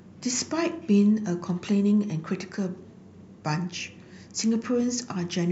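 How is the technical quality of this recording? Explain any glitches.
No technical glitches are audible.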